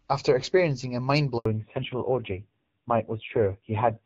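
At 1.38 s the speech quickly dies away and stays silent for 80 ms, until 1.46 s. This is a handover gap: the call was switched between networks, no speech frames arrived during the switch, and the audio from that interval is lost.

From 1.46 s to the end, a fallback to narrowband removes everything above 4 kHz. Before the gap, the HD Voice wideband path sounds only lightly coded. After it, the speech turns dull and rough, which fits a low-rate narrowband codec around 5.9 kbit/s.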